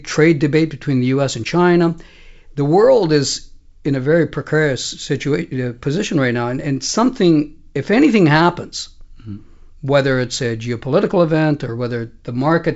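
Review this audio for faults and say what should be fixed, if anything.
Nothing needs fixing: the speech shows the expected character of G.722 wideband telephone coding, with content ending at about 7.7 kHz and at most a faint upper-band grain, which fits the full 64 kbit/s mode of that codec.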